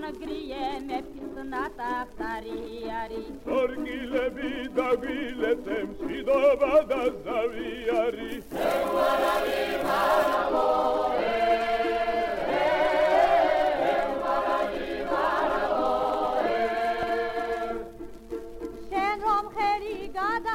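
From 8.28 to 10.35 s the audio turns thin, bright and sibilant. This is pre-emphasis left on. The treble boost follows a 50 µs FM curve, lifting 10 kHz about 11 dB above 1 kHz. The matching de-emphasis cut was never applied.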